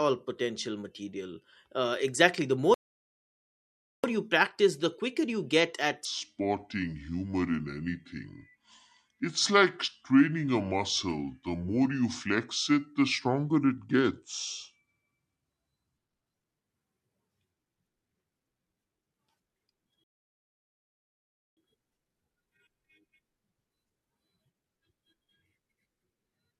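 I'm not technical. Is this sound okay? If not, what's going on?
No, there are three faults in this speech.

There are two rebuffering stalls. At 2.74 s the sound drops to silence until 4.04 s, then carries on from exactly where it stopped, adding about 1.3 s. The same happens from 20.04 s to 21.57 s, adding about 1.5 s. This is what a player does when it runs out of downloaded audio and must wait for more. No speech is lost, but the pauses don't belong there.

There is also a section at the wrong speed, from 6.05 s to 16.34 s. Here the speech plays at 0.70 times its proper speed, so it is slower and deeper, dropping about seven semitones, like a recording played too slowly. The likely cause is that this stretch was played back or edited against the wrong clock, so speed and pitch shifted together. At 16.34 s the speech returns to its normal pace and pitch.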